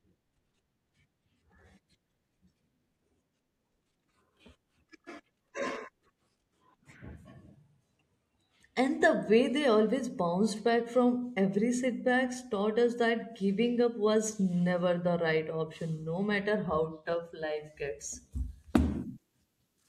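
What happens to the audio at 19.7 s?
Pre-emphasis was left on: the treble boost matching a 75 µs FM curve was never undone, from 18.33 s after "how tough life gets" through the end at 19.89 s. At 10 kHz the speech sits about 13 dB too hot, sounding thin, bright and sibilant.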